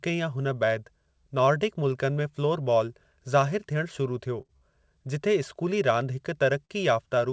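From 4.40 to 4.63 s the speech shows repeated stalls (stutter). Packets reached the receiver late four times in quick succession, and each time the jitter buffer ran dry. The receiver bridged each gap by extending the last sound, about 94 ms in total, with the longest hold 45 ms. Roughly 40 percent of that stretch is concealed audio. Nothing is lost, but the delivery drags and judders.

At 6.65 s, right after "रांदि हिक", there is a short stall from a late packet. One packet missed its playout time and the buffer emptied, so the receiver held the preceding sound for 40 ms. When the packet arrived it resumed from the same point. Playback delay grew by 40 ms. The result is a briefly sustained sound with a slight buzz or dip, heard over the call path's band limit, with nothing above 8 kHz, consistent with G.722 at 64 kbps.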